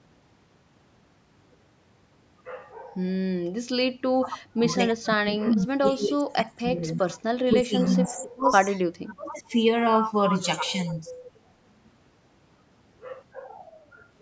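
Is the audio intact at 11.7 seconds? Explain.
Yes, the speech at 11.7 seconds is intact, with only the ordinary call microphone processing trimming the lowest bass as expected.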